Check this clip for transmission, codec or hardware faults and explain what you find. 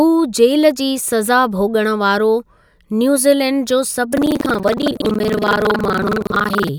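There is one fault: buffer tearing from 4.09 to 6.70 s, right after "न्यूजीलैंड जो". Writer and hardware pointers have slipped and cross every period, so roughly a third of each buffer replays speech about a fifth of a second old. That gives a steady robotic 21.5 Hz rattle, which fits a 2048-sample buffer.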